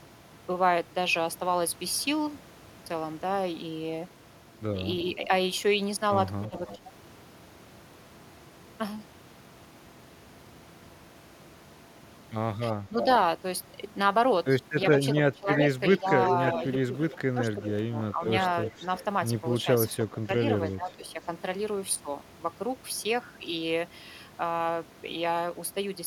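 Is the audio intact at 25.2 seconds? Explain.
Yes, at 25.2 seconds the audio is intact, with no audible fault at that moment.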